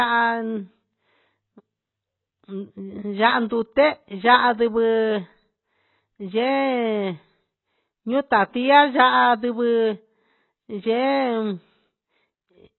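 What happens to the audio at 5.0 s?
At 5.0 s the speech carries the same AAC compression damage heard throughout: nothing above 4 kHz, and the remaining band is heavily degraded. That points to a very low bitrate, around 16 kbps, likely from AAC-LC quantising coarsely. A plain low-pass filter would leave the lower band clean.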